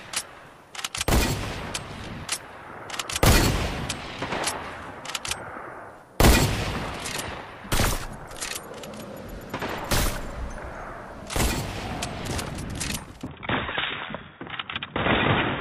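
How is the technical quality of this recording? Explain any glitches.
There is one glitch near the end. Input switched to a poorer device, from 13.27 s to the end: the sound abruptly loses everything above 3.8 kHz, drops about 5 dB, and gains a faint new hiss, likely from a change to a narrower-band microphone.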